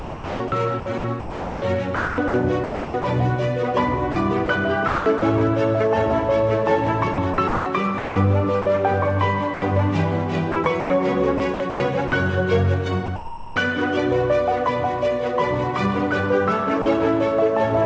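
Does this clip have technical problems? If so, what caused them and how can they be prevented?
Yes. Sound chopped by the voice detector occurs at 0.0–3.04 s, 4.12–5.22 s, 7.14–8.66 s, 10.52–12.12 s and 13.06–13.56 s. A sending voice detector likely toggled repeatedly, swapping quiet passages for comfort noise, about 1.6 s in the first stretch and 0.3–0.5 s in each later one, so the sound stutters. Lowering the detector's threshold or lengthening its hangover time prevents this.

Sound dropped by the voice detector occurs at 9.54 s (80 ms) and 16.82 s (40 ms). The detector likely judged faint sound to be background and stopped sending, so brief comfort noise replaced it. Disabling discontinuous transmission or making detection less aggressive avoids these dropouts.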